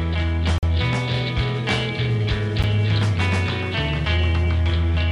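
At 0.58 s the sound drops out completely until 0.63 s, a hole of about 46 ms with hard edges. At 2.63 s a second, shorter hole of about 12 ms cuts in. Both are a gap between stream segments. The timestamps of adjoining chunks leave a small space, and the player fills it with silence. The holes fall about 2 s apart, which fits 2-second segments. Nothing is lost. Time is only added.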